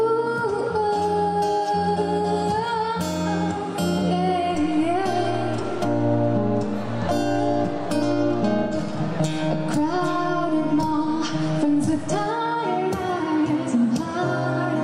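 AAC frame loss with concealment at 3.98 to 4.03 s (43 ms, fitting one frame) and 8.63 to 8.74 s (85 ms, fitting two). The decoder rebuilt the missing audio from the last good spectrum, leaving smeared, noisy or phasey patches.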